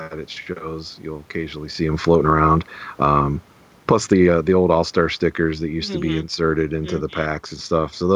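A speech recording with automatic gain falling from 3.75 s to 8.11 s. The gain control judged the input too loud or its background noise too strong and eased its gain down by about 6 dB. The speech and the room noise behind it sink together. The level shift near a second and a half comes from the talker moving, not the system.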